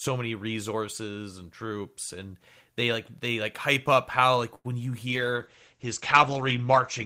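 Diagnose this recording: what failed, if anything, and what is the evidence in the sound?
At 4.55 s to 4.66 s one sound in the speech is held unnaturally long, a smeared sustain with a faint buzzy texture, after which the speech resumes exactly where it left off. This is a short stall from a late packet at the network and jitter-buffer stage. The packet missed its playout time, so the receiver stretched the previous sound for about 90 ms until it arrived. Nothing was lost, but playback now runs about 90 ms later.

From 5.08 s to the end the speech turns muffled and rough and watery, losing its crispness and air. This is a call bitrate drop at the codec stage. A fall in the bandwidth estimate made the encoder go from 32 kbps to 11 kbps, so the Opus coding became coarser and the audio bandwidth narrowed from 20 kHz to 8 kHz, removing the upper harmonics. The bitrate stays low for the last two seconds and does not recover before the recording ends.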